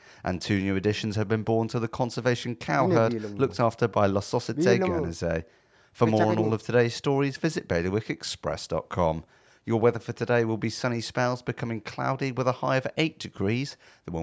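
No technical faults are audible.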